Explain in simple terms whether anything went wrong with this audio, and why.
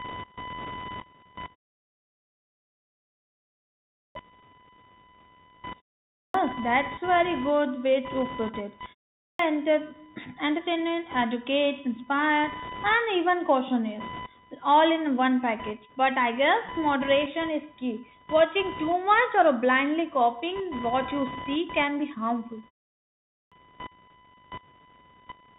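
A steady, high-pitched buzz runs under the whole recording, rising and falling on its own schedule rather than following the speech. This is computer activity noise. As the computer's processor or graphics card works harder or less hard, the electrical ground shared with the audio circuit shifts. That puts a fine, rapid pulsing into the sound, here at roughly a thousand times a second, heard as a whine or buzz.

The speech also sounds thin and muffled, like an old phone call. Hissy sounds such as s come out scratchy, and a grainy hiss sits under the talking. That is the Bluetooth CVSD headset codec. It is the basic format Bluetooth headsets use for calls. It tracks the sound only by nudging it up or down in small steps, so quick, sharp sounds get roughened. Nothing above about 3.8 kHz gets through, which is where the dull, boxed-in quality comes from.

Four times, speech jumps in abruptly with its opening chopped off. 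This happens at 3.93 s, at 6.12 s just before "that's very good way", at 9.16 s right after "put it", and at 23.25 s. Each time roughly a quarter of a second is missing. This is a clipped start after a pause. The playback device dozes off during a gap and takes a moment to wake, swallowing the first sounds.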